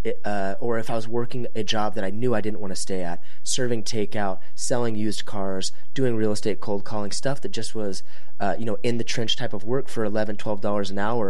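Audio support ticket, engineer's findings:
DC offset, whole clip: nothing audible as such, but steady energy sits at 0 Hz. Waveform shifted off zero by a constant of about -16 dBFS, eating headroom.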